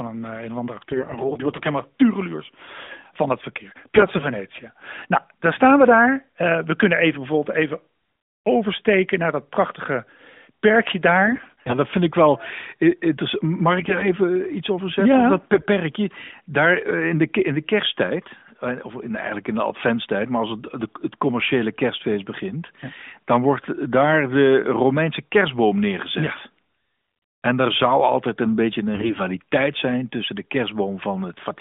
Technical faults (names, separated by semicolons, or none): AMR bit errors